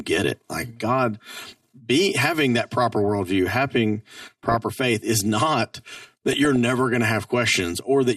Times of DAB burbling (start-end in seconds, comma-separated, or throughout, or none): 4.21-4.54, 5.94-6.56